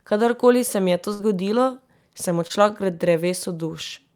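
A burst of packet loss at 1.13 to 1.21 s, right after "se mi je to", leaves the receiver extending the last sound for about 59 ms while fading it, before resuming at "zgodilo sem" with about 60 ms lost.

A short concealed packet loss at 2.47 to 2.52 s, following "je to zgodilo sem", is patched with about 25 ms of continued sound blended back in, leaving a brief smear where about 20 ms never arrived.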